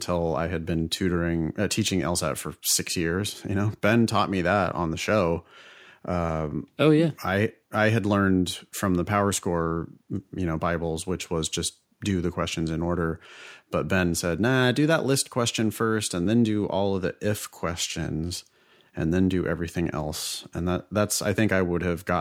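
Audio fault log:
No faults are heard anywhere in this speech recording. There is nothing to log.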